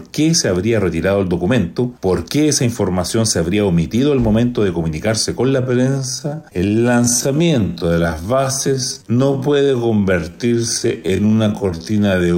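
At 5.58 s the pace drops abruptly and stays slowed through to the end, running at about 0.58 times normal speed while the pitch holds steady. This is a time-stretched section, likely produced by software lengthening that stretch of audio to fill a set duration, repeating short fragments to preserve pitch. The repeated pieces make the slowed portion drag.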